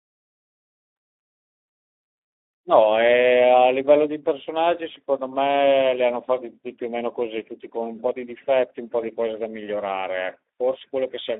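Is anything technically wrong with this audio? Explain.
Yes. Speex codec damage runs through the whole speech clip. The sound points to a low setting, around 11 kbps. At that rate the CELP coder has few bits left for the excitation signal, so the voice turns noisy and hoarse. The damage is plainly audible. The band is also narrowed to about 300 Hz to 3.7 kHz. That gives a thin telephone-line tone with no low body and no air on top.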